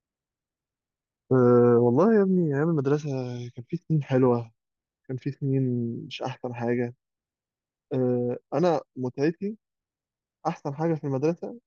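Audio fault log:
No faults can be heard anywhere in the speech. There is nothing here to log.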